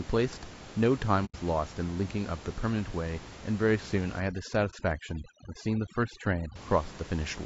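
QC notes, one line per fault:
throughout: low-delay AAC compression, likely AAC-ELD at around 32 kbps; speech sounds rough and grainy, spectrogram shows noise filling between harmonics and a lowered top band.
1.25 to 1.36 s and 4.70 to 4.74 s: AAC frame loss with muting; lost frames zeroed, giving a soft-edged hole of about 90 ms and a brief dip of about 30 ms, seen as faded waveform gaps.
4.20 to 6.56 s: overdone noise removal; bands near the noise floor cut off, room noise drops to twinkling specks, spectrogram shows patchy holes.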